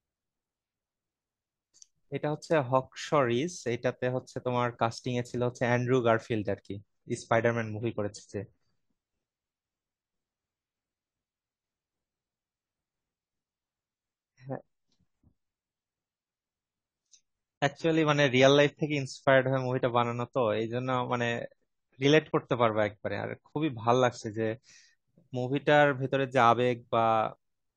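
From 6.70 s to 24.70 s the speech drops to a lower-bitrate version of the adaptive stream, which fits a switch to roughly 24 kbit/s AAC. The change is abrupt and gapless. Treble is absent above 9.9 kHz and codec artefacts become audible until full quality returns.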